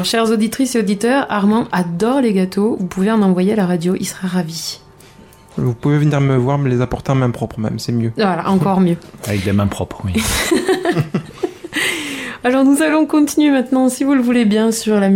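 No technical faults can be heard anywhere in this audio.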